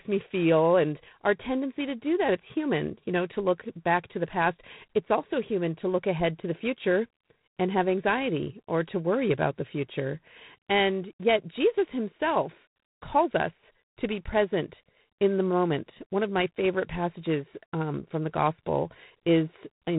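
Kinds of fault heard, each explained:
G.726 ADPCM: A harsh, rasping hiss rides on the speech throughout, rising and falling with its level, and nothing passes above 3.9 kHz. The coder sends only a few bits of difference from a predicted sample, which fits the 24 kbit/s mode.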